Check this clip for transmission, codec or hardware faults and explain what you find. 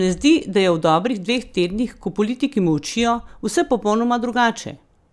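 Nothing turns up here; the speech comes through steady and intact, with no dropouts, glitches or other transmission, codec or hardware trouble to point to.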